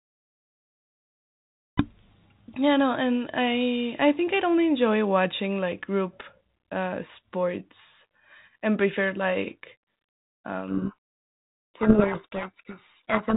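At 10.68 s the receiver starts reading the G.726 code words with their bit order reversed, a codec payload misread that lasts to the end of the clip. Each ADPCM difference value is decoded from scrambled bits, so the predictor follows the wrong values and the speech sinks under harsh, grinding distortion. Before that point the 32 kbit/s G.726 link gives only light coding damage, band-limited below 4 kHz.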